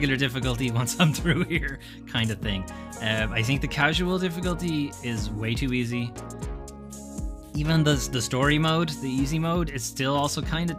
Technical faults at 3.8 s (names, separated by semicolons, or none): none